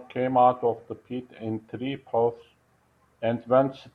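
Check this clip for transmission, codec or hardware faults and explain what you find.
Nothing in this speech recording points to a technical fault; the signal stays continuous and undisturbed throughout.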